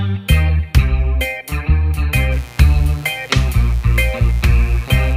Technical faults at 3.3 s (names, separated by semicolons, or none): mains buzz